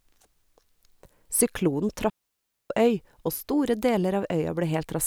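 At 2.10 s the speech drops into a digital wireless dropout lasting about 0.6 s, until 2.70 s. The receiver lost too much data and muted with a very short fade, leaving a clean near-silent hole. Unlike an analogue radio dropout, no noise burst precedes or follows it.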